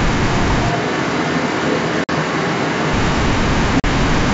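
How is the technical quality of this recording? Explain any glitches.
Quality is compromised by a sudden microphone change and two short dropouts, heard over clear wideband telephone audio with only faint G.722 coding hiss.

From 0.69 to 2.94 s, the sound turns roomy and hollow, with thinner bass, about 5 dB lower level and more audible background noise. This is likely a switch to a distant microphone replacing the close one, with abrupt transitions at both ends.

At 2.04 to 2.10 s (50 ms) and 3.80 to 3.85 s (40 ms), there is packet loss on an ADPCM call. Each hard-edged silent gap, spanning several lost packets, leaves the decoder's predictor and step size out of step with the sender's, so the audio resumes slightly distorted before settling.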